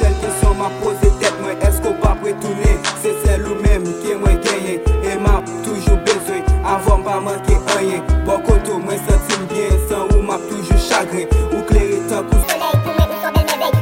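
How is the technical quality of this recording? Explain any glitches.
The recording has one clear glitch, at the very end. From 12.43 s to 13.81 s there is a section at the wrong speed: the audio runs 1.62 times too fast, likely from being fitted to the wrong clock, so everything turns hurried and rises about seven semitones. A spectrogram shows all harmonics jumping upward, and the waveform compresses in time.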